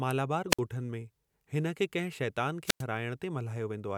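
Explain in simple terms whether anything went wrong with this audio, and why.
The speech briefly drops into silence twice, from 0.50 to 0.60 s and from 2.64 to 2.84 s, just after "हिन खे कंहिं शैतान". This is a wireless microphone squelch dropout: the radio signal weakened, so the receiver muted the sound for a split second.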